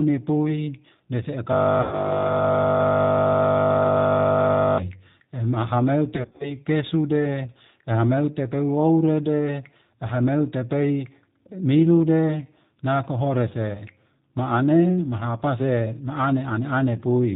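Throughout, the speech has the narrow, slightly rough and synthetic quality of the G.729 codec, with plainly audible codec damage. Nothing is present above 4 kHz, and the texture fits an 8 kbit/s low-bitrate speech coder. It rebuilds each 10 ms frame from a vocal-tract filter, a pitch predictor and a handful of pulses rather than the original waveform, so fine detail and breathiness are lost.

From 1.81 to 2.21 s, VoIP packet loss concealed by the speech codec stretches the last sound into a buzzy tone or coloured noise that fades. This is consistent with about 110 ms of missing audio bridged by extrapolating the previous pitch and filter. From 6.16 to 6.56 s a second episode has about 150 ms of short losses scattered across about 240 ms, the longest near 40 ms. Because each decoded frame depends on the one before, the speech stays weak and distorted for a short while after each gap.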